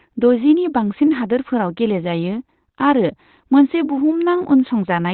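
Throughout the speech, the audio was likely squeezed through heavy Opus compression at a very low rate, which fits roughly 12 kbps with the encoder switched into its speech-oriented SILK mode and narrowband bandwidth. To save bits, that mode discards the upper spectrum, so nothing survives above about 4.2 kHz. The result is a muffled, boxy, telephone-like sound with a hoarse, rough edge on the voice, and sibilants dull and lacking crispness.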